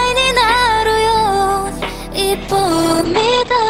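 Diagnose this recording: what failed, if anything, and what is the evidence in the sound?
A call bitrate drop at the codec stage: from 2.42 s to the end, the sound turns coarse and rough, and its top end falls from 20 kHz to 8 kHz. That fits the encoder starving from about 32 to about 9 kbps for 1.3 s.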